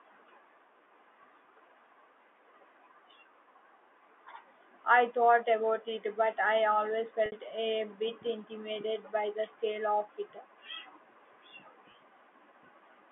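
At 7.26 to 7.32 s, between "it but I always" and "a bit intimidated by", there's packet loss with pitch repetition. About 60 ms went missing, consistent with three lost packets, and the last pitch period loops as a brief buzzy hold. A shorter 20 ms dropout at 11.92 to 11.94 s repeats it, all through the narrow G.711 phone band.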